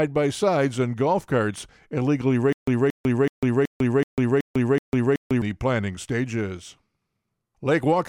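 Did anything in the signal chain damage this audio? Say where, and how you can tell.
Yes. From 2.53 to 5.42 s there is a stutter with silent gaps: a burst of about 227 ms returns seven times, each followed by about 149 ms of digital silence, giving an even 376 ms cycle. On a waveform this appears as identical blocks separated by flat, near-silent stretches; a spectrogram shows the same pattern repeated with blank vertical bands between. The likely cause is a playback or streaming buffer stall, replaying its last fragment on each retry, so the audio due in that span is lost.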